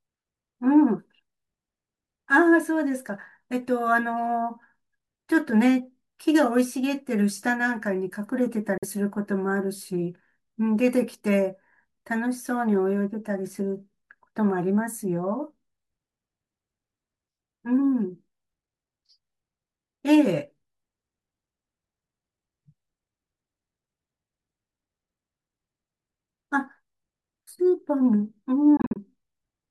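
Speech with two brief silent gaps, likely Bluetooth dropouts from late packets: a clean 46 ms hole at 8.78 s, then scattered losses totalling about 116 ms between 28.77 and 28.98 s.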